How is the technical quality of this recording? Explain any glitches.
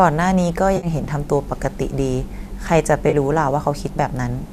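The speech carries two brief glitches, both AAC frame loss with concealment. At 0.77 to 0.87 s, about 60 ms goes missing, and at 3.10 to 3.15 s about 30 ms, which fits a short run of 10 ms frames from the low-delay codec this audio likely passed through. Rather than dropping to silence as a plain dropout would, the decoder rebuilds each gap from the last good spectrum, so both spots sound like a smeared, noisy or phasey patch.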